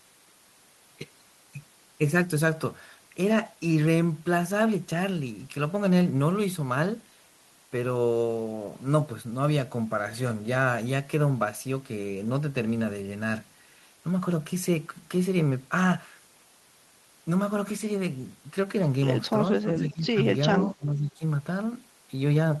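An echo canceller likely misjudged double talk and suppressed the near-end speech: level dips by about 15 dB from 19.62 to 20.18 s, then nearly 20 dB from 20.64 to 21.22 s.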